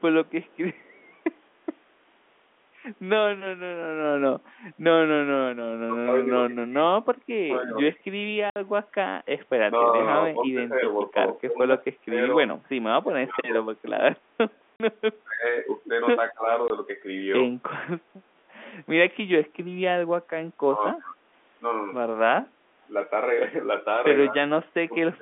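From 0.0 to 1.16 s there is an echo leak: a faint copy of the speech trails the original by 216 ms, about 40 dB down. The far end's echo canceller was likely not removing everything its microphone picked up from its loudspeaker. On a spectrogram it shows as a weak, time-shifted ghost of the harmonic bands. The same leak returns briefly from 14.5 to 14.62 s.

From 5.84 to 8.18 s the speech is suppressed in double talk. The level repeatedly dips while the other side is talking, in roughly a second of drops lasting up to about 30 dB, with dulled highs and brief dropouts. The likely cause is an echo canceller that could not tell its own talker from the loudspeaker echo and attenuated both. The waveform envelope shows ragged notches, and the spectrogram shows upper bands thinning.

From 8.5 to 8.56 s, packet loss filled with silence cuts a 60 ms hole with hard edges. That length fits three 20 ms packets. 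On the waveform it is a flat, near-silent stretch, and on the spectrogram it is a vertical blank gap.

Suppression returns from 9.71 to 13.55 s, with drops of up to about 25 dB. More silent gaps follow from 14.76 to 14.8 s (40 ms) and from 16.68 to 16.7 s (20 ms), with another suppression stretch between them from 15.24 to 16.49 s (up to about 20 dB). Later suppression appears from 20.68 to 21.2 s (up to about 25 dB) and from 24.3 s to the end (up to about 30 dB).

The 250 Hz to 3.5 kHz telephone band shows as a spectrogram ceiling throughout.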